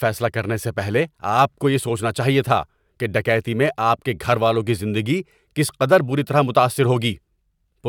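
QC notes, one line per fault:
Nothing to flag on this speech recording; it all sounds fine from beginning to end.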